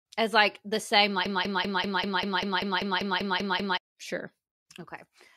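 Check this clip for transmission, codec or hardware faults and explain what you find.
One fault stands out: a broken-record loop in the speech from 1.26 s to 3.78 s. A fragment of about 195 ms repeats exactly, back to back, 13 times, producing a mechanical, machine-gun stutter, and the speech that belonged in those two and a half seconds never plays. The likely cause is a stalled player, encoder or stream that kept resending its last buffered fragment. Unlike an echo, the repeats don't decay or overlap. Unlike a dropout, the gap is filled rather than silent.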